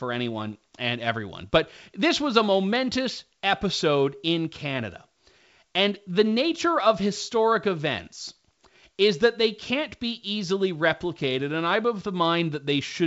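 No technical faults can be heard in this speech recording. It carries the bandwidth of G.722 wideband telephone coding, reaching up to about 7 kHz, with any coding trace faint at most, which fits the full 64 kbit/s mode.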